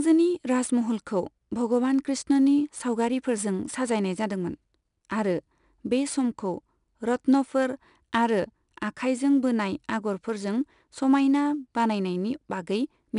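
A speech recording carries 4-bit ADPCM compression from start to finish, and the damage is plainly audible. Each sample is coded as a coarse 4-bit step from a predicted value, so a gritty hiss rides on every loud syllable and rises and falls with the level, while sharp onsets smear where the adaptive step lags behind. Nothing reaches above 10.6 kHz, which points to a sample rate near 22 kHz and a bitrate around 89 kbps.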